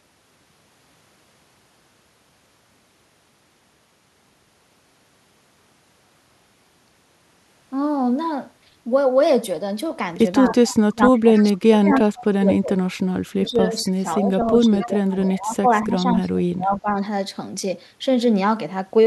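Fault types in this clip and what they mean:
Speech suppressed in double talk: When both ends talked at once, the echo canceller likely could not tell the local talker apart from loudspeaker echo, so it turned everything down together. A brief, shallow dip of about 5 dB comes at 10.45 to 10.53 s. Then the speech sinks much deeper, by roughly 25 to 30 dB, from 10.89 to 13.0 s and again from 13.35 to 16.95 s, losing presence for several seconds.
Echo leak: One side likely plays the call on a loudspeaker, and its echo canceller let part of the microphone pickup slip through and return. The result is a faint, delayed copy of the speech trailing the original by 248 ms. It is heard as short scraps at 10.47 to 10.74 s, 11.36 s, 13.86 s and 14.8 s, sitting roughly 15 to 30 dB below the main speech.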